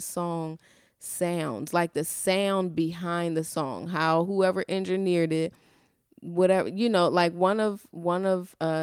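No audible technical faults.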